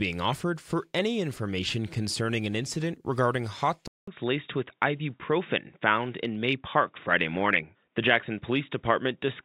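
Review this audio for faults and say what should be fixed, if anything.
At 3.88 s the speech drops out for about 200 ms, then comes back dull and boxy through to the end at 9.44 s. Nothing reaches above 3.8 kHz after that point. The level stays roughly the same, and there's a new, faint background noise well under the speech. That pattern is a likely input switched to a poorer device, such as a fallback mic or a headset dropping into its narrowband call profile. To fix it, lock the recording input to the intended device and turn off automatic device switching before you start.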